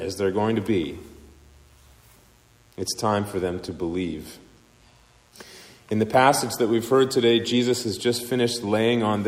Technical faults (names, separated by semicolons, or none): mains buzz